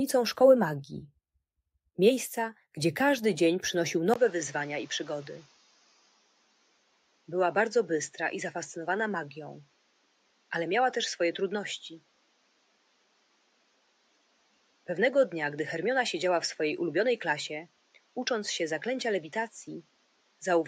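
At 4.14 s the input likely switched to a poorer device. After a brief silence, the band narrows, so the sound turns duller, slightly quieter, with faint new background noise. The noise suppressor then mistook parts of the sound for noise, cutting them by up to about 12 dB at 5.47–7.28 s, 9.65–10.51 s, 12.0–14.88 s, 17.68–18.16 s and 19.83–20.42 s, so they sink in level.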